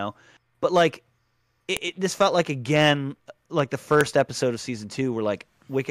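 At 1.77 s, just before "it this felt like", a sharp, loud click cuts into the speech. This is a file header played as audio: leftover header bytes from a joined piece.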